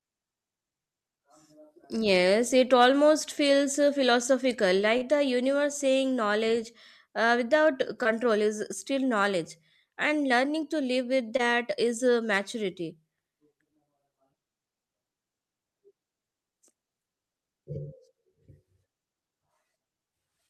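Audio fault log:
4.97–5.03 s, 8.03–8.07 s and 11.37–11.41 s (just before "is uh maturity"): short concealed packet loss. Each time 20 to 40 ms of speech arrived too late, and the receiver stretched the preceding sound across the gap before blending back. That leaves a brief smear rather than the silent hole or hard click of an unconcealed dropout.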